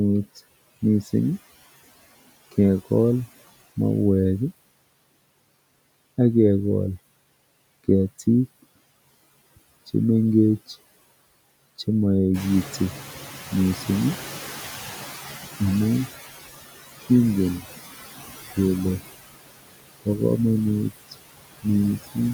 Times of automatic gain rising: none

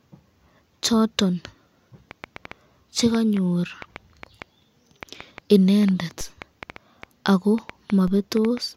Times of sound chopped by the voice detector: none

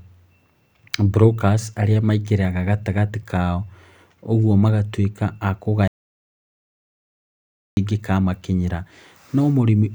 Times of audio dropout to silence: 5.88-7.77

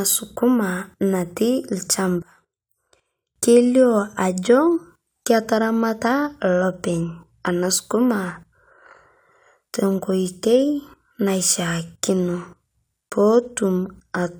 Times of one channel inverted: 2.22-3.36

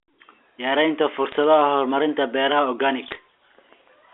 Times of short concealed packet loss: none

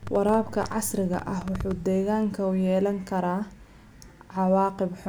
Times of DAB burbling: none

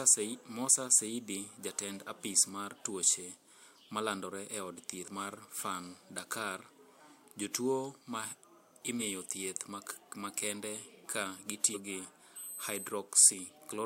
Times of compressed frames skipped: 5.04-5.08, 8.99-9.02, 11.73-11.77

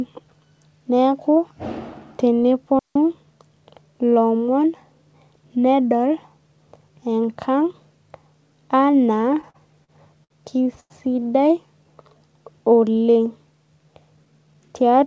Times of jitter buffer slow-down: 11.66-12.20

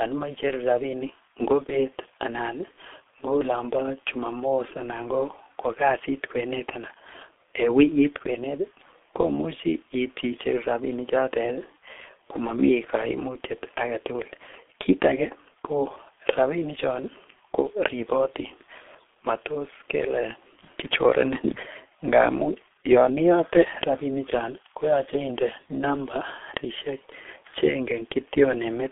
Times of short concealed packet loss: none

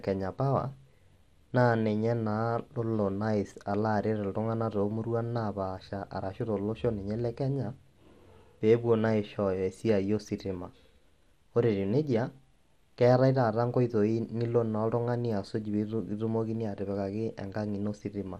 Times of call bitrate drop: none

